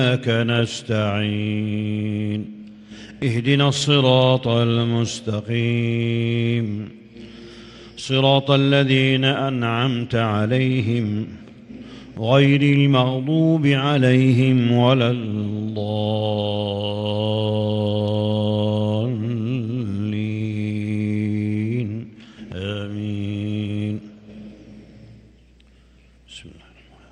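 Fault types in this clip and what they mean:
No technical faults can be heard in this audio.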